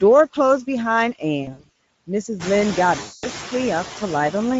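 From the start, the speech carries Speex codec damage: a hoarse, grainy texture on voiced sounds, which points to a middle Speex quality setting with too few bits for the excitation. On a spectrogram, the harmonics look smeared and noisy, and the region above 4 kHz is a diffuse, noise-like wash rather than distinct consonant detail.

Noise suppressor artifacts also run throughout. The suppressor pulls steady background noise down by about 19 dB between phrases, then lets it back up under the speech, so the noise floor pumps. On a spectrogram, this shows as dark gaps between phrases and flickering, isolated specks of leftover noise. This gets harder to hide once the room noise rises by about 16 dB at roughly 2.5 s and sits only about 14 dB under the speech.

From 1.43 to 1.69 s, VoIP packet loss concealed by the speech codec breaks in. About 220 ms of audio is missing, scattered across 360 ms, with the longest gap 60 ms. 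The decoder repeats its last pitch and filter, so the speech turns into short buzzy or noisy, fading stretches. On a waveform, these look like regular, decaying pulse trains. On a spectrogram, they look like frozen horizontal harmonics. The same fault returns from 3.01 to 3.29 s, again losing about 220 ms, with the voice staying weak and distorted just after.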